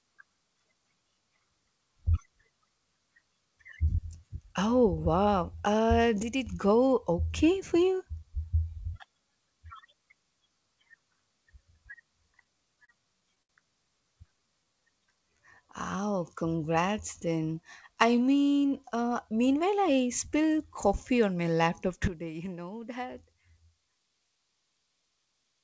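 A speech clip that's come through a call path, band-limited with nothing above 8 kHz, which fits G.722. At 6.23 s there's a sudden gain jump: the speech and the background noise drop together by about 8 dB until 6.47 s, then come back. It's likely a gain setting applied in one step with no ramp. The same sudden gain jump hits again at 22.08 s, this time about 12 dB down, and stays there to the end. Between 12.44 and 13.51 s you get repeated stalls (stutter): six little gaps where the jitter buffer ran dry and the receiver stretched the last sound, 143 ms filled in all, the longest 68 ms. Nothing actually goes missing, but the speech catches and drags. Right after, from 14.18 to 16.19 s, there's a jitter buffer slow-down: pitch periods get repeated to rebuild the reserve, so the speech plays at about 92% speed with 169 ms added and sounds drawn out at the same pitch. Then from 18.20 to 20.01 s comes a jitter buffer speed-up, the reverse move, trimming short pitch-period chunks, roughly 150 ms in total. 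That pushes it to about 108% speed, so it sounds a bit hurried.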